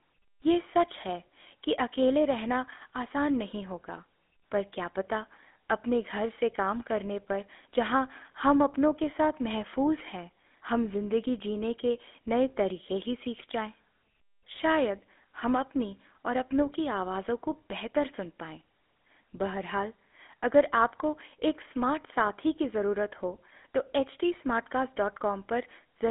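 Speech, and the whole thing has gone through what sounds like the original GSM full-rate codec. The band is squeezed to roughly 200 Hz to 3.6 kHz, so there's no low body and no air on top, and the codec damage is plainly audible: a buzzy, gravelly grain on the voice. That comes from the codec rebuilding the voice from a vocal-tract model fed with sparse, regularly spaced pulses, which fits a 13 kbps GSM stream.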